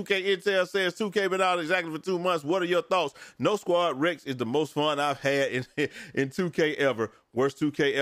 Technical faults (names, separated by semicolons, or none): none